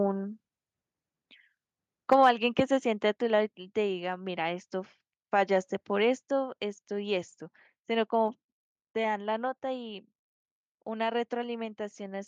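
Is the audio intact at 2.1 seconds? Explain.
No. From 2.12 to 2.29 s the loudest part of the speech turns harsh and crackly, with its peaks flattened. This is microphone overload, likely from an input level about 4 dB beyond what the converter can handle, so a few percent of the samples have their tops sheared off.

At 2.13 s, right inside that distorted peak, the whole level drops abruptly by about 4 dB and stays lower. This sounds like the microphone volume being stepped down, likely by the call software reacting to the clipping and cutting the device's input gain in a single jump.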